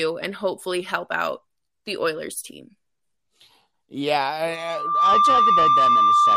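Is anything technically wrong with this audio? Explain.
Yes. From 4.50 s to the end, a steady 1.2 kHz tone swells over about half a second into a loudspeaker feedback squeal well above the speech, as the microphone re-amplifies its own loudspeaker.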